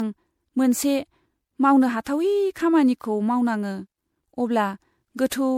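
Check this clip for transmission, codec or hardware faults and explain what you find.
The clip has one fault, present throughout: generation loss. The speech was most likely encoded to MP3 and decoded again about four times, at a quality that fits 96 kbit/s. Each pass re-quantises on a shifted frame grid, so coding noise and spectral gaps pile up. The result is a swirly, hollow, smeared tone with blurred consonant attacks, and nothing above 20.7 kHz.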